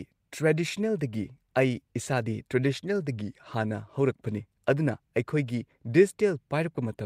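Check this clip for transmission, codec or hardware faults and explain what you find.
No faults can be heard anywhere in this recording.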